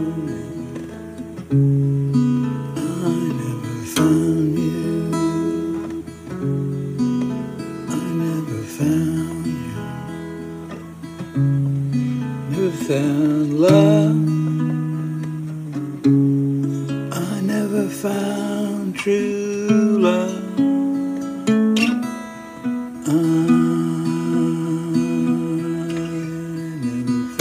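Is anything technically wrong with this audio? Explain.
No, nothing technically wrong here.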